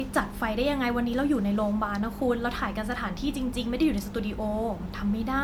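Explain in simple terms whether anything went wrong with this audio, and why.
The speech shows generation loss, most likely from being saved as MP3 about five times in a row. Each save squeezes the sound by throwing away detail, and each new pass slices it on a slightly different grid, so the damage piles up. From start to finish, the voice sounds swirly, smeared and hollow, with a watery shimmer, and the sharp starts of sounds like consonants come out blurred rather than crisp.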